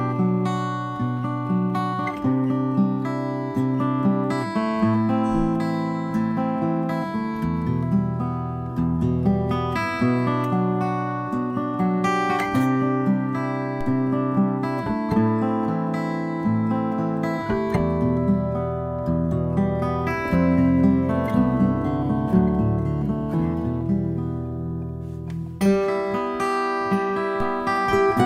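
At 13.81 s and again at 27.40 s there's a DC step: the zero line jumps by about -22 dBFS, then drains away slowly, like a 2 Hz high-pass, giving a low thump each time.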